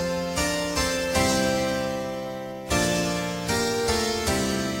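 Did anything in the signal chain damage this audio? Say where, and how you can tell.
Yes: throughout, a gritty, inharmonic fizz about 15 dB below the signal follows loud, bright sound. This points to crude rate conversion that repeated samples without filtering, which fits a 32 kHz to 44.1 kHz change.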